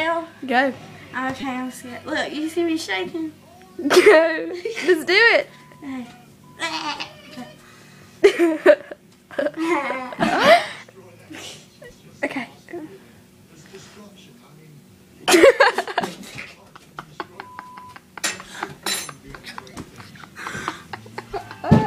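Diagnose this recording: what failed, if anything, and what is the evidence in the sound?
Brief clicky buzzes at 1.41–1.43 s, 12.00 s and 19.72 s are a repeated buffer in the driver or buffer stage. Audio arrived late, so a chunk of about 5 ms replayed four, one and three extra times, joined hard, with essentially nothing lost.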